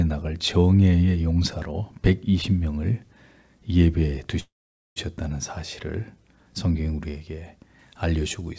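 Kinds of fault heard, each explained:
Call audio freeze: From 4.40 to 4.99 s the sound stretches into a brief fading buzz, then about 470 ms of silence, before resuming exactly where it stopped. Packets were likely held up and the jitter buffer ran dry, inserting roughly 0.56 s of delay without losing anything.
Pre-emphasis left on: From 7.79 s to the end the sound turns thin, bright and sibilant. The treble boost of a 50 µs FM pre-emphasis curve was never undone. That curve is about 11 dB up at 10 kHz, but the call path cuts off above 8 kHz, so the excess sits just below that.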